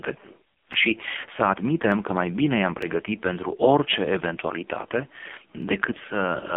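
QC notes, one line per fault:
Throughout: AMR narrowband mobile codec. Heavy coding damage leaves a buzzy, synthetic speech tone, which fits a very low AMR-NB mode around 5 kbps. On a spectrogram, energy sits within a 200 Hz to 3.5 kHz telephone band, with nothing above 3.7 kHz.
1.92 s, 2.82 s, 5.62 s: dropped samples. Each is a single sharp click, likely from a fraction of a millisecond of samples going missing, so the waveform jumps abruptly to a later value. It shows as a thin vertical line across the spectrogram and a step discontinuity in the waveform.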